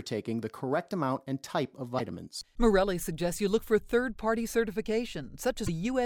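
There are two short glitches, one at 1.97 to 2.01 s and another at 5.66 to 5.69 s, where the audio briefly breaks up and skips forward. The likely cause is a broken MP3 bit reservoir. Frames have gone missing, so the next frame reaches back for borrowed data and decodes someone else's bytes instead. Each disturbance lasts about 32 ms, a bit more than one frame of roughly 26 ms.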